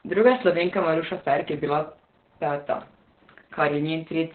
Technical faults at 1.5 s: Opus voice compression

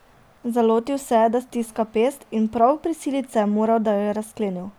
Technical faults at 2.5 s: none

